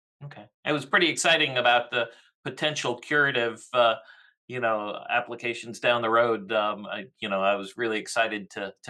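No technical faults can be heard anywhere in the clip.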